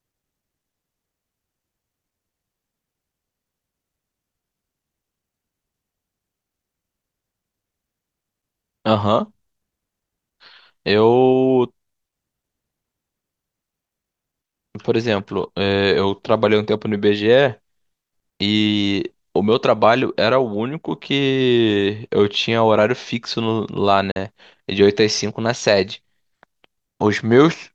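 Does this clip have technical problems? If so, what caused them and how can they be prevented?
Yes. From 24.11 to 24.17 s the speech drops out to a brief silence, then resumes slightly further along as though it had kept playing, skipping about 43 ms of sound, which fits two lost packets. This is likely a Bluetooth dropout: packets did not reach the headphones in time and were discarded, leaving silence until good packets arrived. Keeping the headphones close to the source with a clear line of sight, away from crowded 2.4 GHz Wi-Fi traffic, prevents it.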